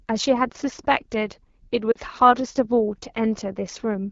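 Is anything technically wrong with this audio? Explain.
Yes. Throughout the clip the speech carries AMR wideband (HD Voice) codec damage. It sounds rough and raspy, which points to a low rate around 8.85 kbit/s. On a spectrogram the energy stops near 7 kHz, with a smooth noise-like band above 6.4 kHz.

From 1.92 to 1.97 s there are lost AMR speech frames, about 40 ms, consistent with two frames. The decoder repeats its last good settings at falling gain, giving a brief warbling dip. The waveform shows a short, fading smear.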